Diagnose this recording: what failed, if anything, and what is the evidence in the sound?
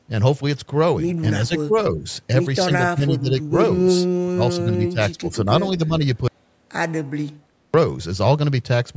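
Call processing's echo canceller likely mistook the speech for echo during double talk, so speech is suppressed in double talk. It dips by up to about 25 dB at 1.47, 1.93, 2.65, 2.94, 4.22 and 5.78 s, longest from 4.22 to 5.5 s.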